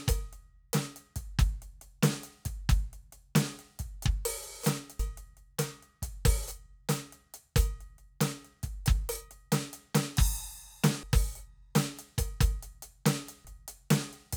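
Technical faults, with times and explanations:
4.99 s, 11.03 s and 13.45 s: damaged data in a compressed stream. Each is a brief chirp, squawk, click or short hole cutting into the music for an instant. At each point the compressed bytes reaching the decoder were corrupted, so it misread the frame there and lost its place in the stream. The odd sound is the decoder misreading or dropping the bad data before it finds the next valid frame header and recovers.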